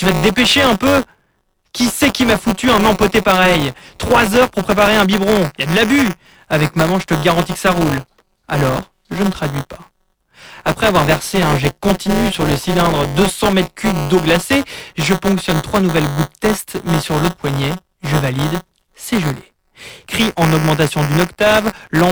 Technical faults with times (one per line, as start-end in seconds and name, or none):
0.00-22.12 buffer tearing